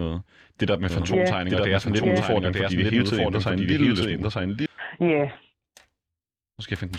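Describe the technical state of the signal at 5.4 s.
At 5.4 s the speech signal is intact, with no dropout, distortion, glitch or other technical fault audible at that moment.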